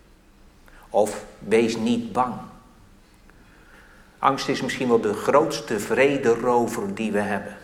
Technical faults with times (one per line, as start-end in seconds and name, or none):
none